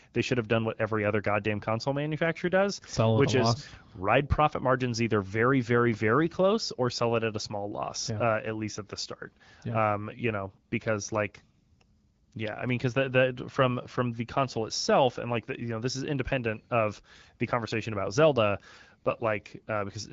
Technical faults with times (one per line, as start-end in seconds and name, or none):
none